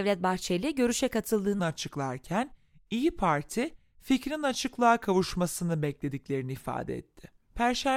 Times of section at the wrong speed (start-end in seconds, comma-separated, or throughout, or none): 1.59-7.96